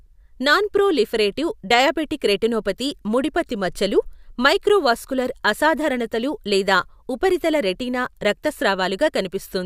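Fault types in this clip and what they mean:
No faults can be heard.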